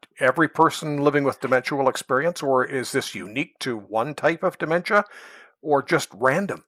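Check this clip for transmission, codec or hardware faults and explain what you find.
Nothing wrong turns up anywhere in this speech recording, so there's simply no fault to report.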